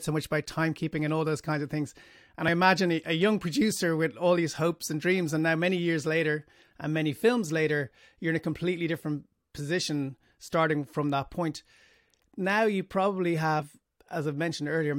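Right near the end, at about 13.59 to 13.62 s, the speech hits a case of compressed frames skipped. A bit of the encoded stream never got played, either missing from the file or thrown out by the decoder as corrupt, so the audio jumps forward by roughly 40 ms.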